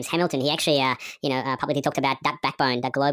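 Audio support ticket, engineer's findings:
Wrong sample rate, throughout. Speech plays fast and high: tempo 1.45x, pitch up about 6.45 semitones, both shifted together with no formant or timing correction. Probable component: playback or resampling stage passing raw samples at a higher clock than capture, no rate conversion applied. The ratio fits audio recorded near 22 kHz being played out at 32 kHz. Check device rate negotiation and the sample-rate header.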